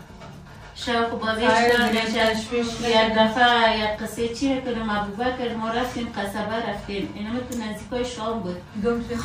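From 1.68 to 2.49 s a steady buzz near 91.5 Hz rides on the sound, with the pace barely slowed. This is a block size mismatch (padded): short blocks are zero-filled to a longer read size, leaving a tiny gap each block.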